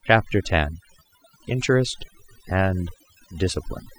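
Throughout the speech, overdone noise removal strips frequency bands sitting near the noise estimate, taking quiet voice detail too, leaving twinkling specks in near-silence.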